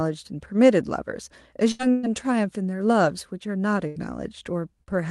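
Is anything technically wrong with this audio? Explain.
Yes. There are two kinds of packet-loss fault in this speech.

Bursts of packet loss occur at 1.71 to 1.82 s, 1.91 to 2.06 s and 3.87 to 3.98 s. About 80, 120 and 80 ms of speech never arrived. The receiver stretched the last sound and faded it, so you hear a held buzz or hiss, then a jump forward.

A short concealed packet loss occurs at 4.83 to 4.91 s. Roughly 40 ms was lost and patched from the preceding sound. It comes across as a brief smear or wobble.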